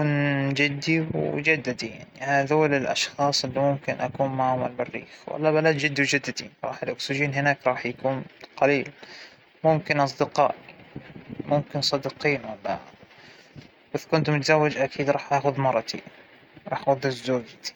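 No technical faults detected.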